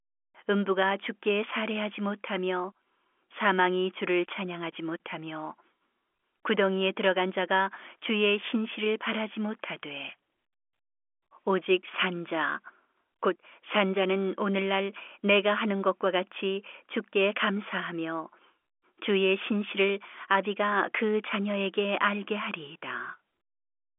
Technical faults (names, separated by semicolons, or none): none